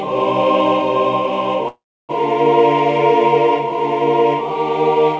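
At 1.68 s the audio stalls until 2.11 s, a call audio freeze, likely from packets held up so the jitter buffer ran dry. The last sound smears briefly, then about 0.31 s of silence before playback resumes where it left off, so nothing's lost, just delayed by roughly 0.41 s. The band stops at 8 kHz throughout, which fits a wideband call codec such as G.722.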